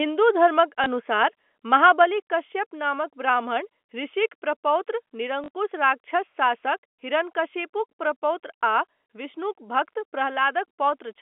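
Right at 0.84 to 0.86 s there's a packet loss with the last packet repeated: about 20 ms went missing, which fits one lost 20 ms packet, and the receiver replayed the previous chunk to fill it. That replayed chunk comes through as a small blip.

At 1.02 s the level drops by about 2 dB in one step. That's a microphone volume stepped down, most likely the call software's automatic gain control pulling the input volume back. Voice and background fall together, so it sounds like a sudden small dip rather than a fade.

From 1.74 to 2.02 s there's microphone overload, probably because the input gain was set too high. Peaks push about 2 dB past the converter's limit and a small fraction of samples get their tops sheared off, giving the loudest moments a harsh, crackly edge. Right after, at 2.04 s, the level drops again, by about 4 dB. The gain control seems to react to that distortion by stepping the input down.

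The second packet loss comes right after "ऋषिक प्रपौत्र", at 5.44 to 5.48 s. About 40 ms is gone, which suggests two consecutive packets, and the same chunk gets replayed twice. That gives a short stutter with a buzzy 50 Hz flutter. The G.711 telephone coding carrying all this keeps everything inside the familiar narrow phone band, roughly 250 Hz to 3.4 kHz.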